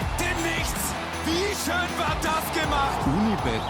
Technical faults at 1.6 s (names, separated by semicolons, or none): none